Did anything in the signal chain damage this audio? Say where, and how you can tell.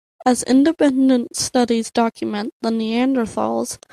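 No, nothing along the signal chain audibly damages this speech recording, and the signal stays intact and continuous throughout.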